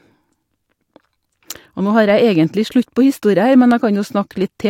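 Nothing in the recording stood out as a technical problem on listening.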